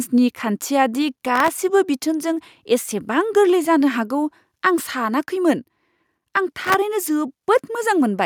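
A gritty, tearing crackle rides on the speech from 1.36 to 1.61 s and again from 6.53 to 6.75 s, then stops. This is processor overload crackle. The processor fell behind on very short buffers, under a millisecond each, and missed deadline after deadline, about 15 times in the first burst and about 30 in the second. Each miss replayed a scrap of old audio with hard edges.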